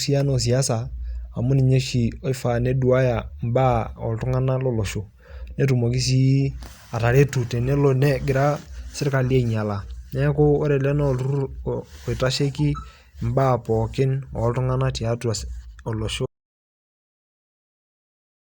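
Speech runs along until 16.26 s, then cuts out mid-flow to dead digital silence that lasts right through to the end of the clip, about 2.3 s of nothing. That's an audio dropout to silence: no room tone, no tail, just silence. The likely story is that the input went away, a device dropping off, a link failing or a mute getting hit, while the recorder kept writing, so whatever came after that point is simply lost.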